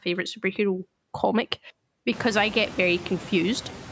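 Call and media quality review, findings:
Noise suppressor artifacts, throughout. Background floor drops about 16 dB in gaps between phrases and comes back up under speech, so the noise audibly pumps with the talker. Probable component: uplink noise suppressor applying per-band, per-frame gain against its steady-noise estimate. Room noise steps up around 2 s by about 18 dB, still about 17 dB below speech. Nothing above 8 kHz, consistent with call microphone processing.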